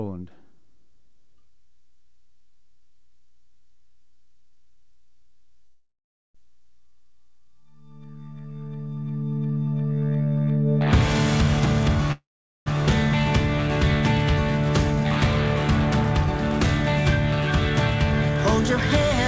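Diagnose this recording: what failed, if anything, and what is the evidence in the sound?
Two call audio freezes, at 5.66–6.36 s and 12.12–12.68 s. Each time the last sound smears into a fading buzz or hiss, then about 0.4 s of silence, and playback resumes where it stopped with nothing lost. Likely a network stall emptying the jitter buffer.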